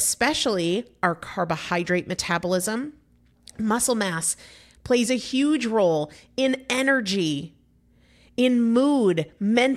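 No technical faults are audible.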